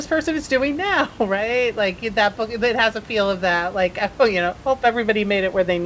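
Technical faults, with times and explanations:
Nothing stood out on listening to this speech clip.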